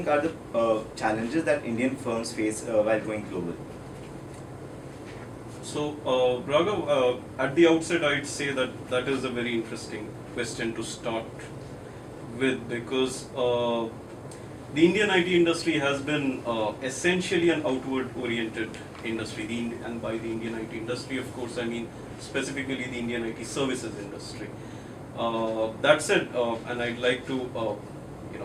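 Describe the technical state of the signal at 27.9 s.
At 27.9 s the signal sits inside a run of repeated timing corrections that lasts from 0.13 s to 28.38 s, where playback comes out at 105 percent speed. The receiver keeps removing short pieces of audio to keep pace with incoming data, and every edit goes the same way. If heard at all, it comes across as small, unevenly spaced hiccups or a tempo that feels rushed and unsteady. A single dropout or glitch would be one isolated event. Here the edits are many, continuous and all in one direction.

The cause is clock drift between sender and receiver, present through the whole clip, with the sender's clock running roughly 5 percent fast. Because the sender delivers samples faster than the receiver plays them, the jitter buffer keeps filling, and the receiver has to trim material to stop it overflowing. That is why the corrections are cuts rather than repeats, and why there are no pauses from the buffer running empty. 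Network jitter would produce irregular timing with no steady direction, whereas this drift pushes consistently one way.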